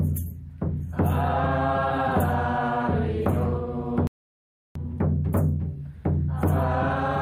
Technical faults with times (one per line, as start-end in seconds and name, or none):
4.07-4.75 playback stall